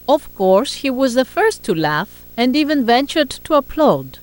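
Video or display buzz runs throughout: a 59.94 Hz field-rate buzz with hash and a 15.7 kHz line tone, roughly 25 dB below the speech, showing as steady horizontal spectrogram bands.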